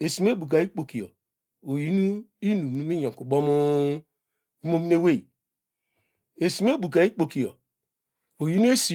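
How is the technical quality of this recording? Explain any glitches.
Nothing here counts as a glitch; the speech comes through Opus voice compression at 24 kbps with full bandwidth kept, leaving only a light trace of the codec.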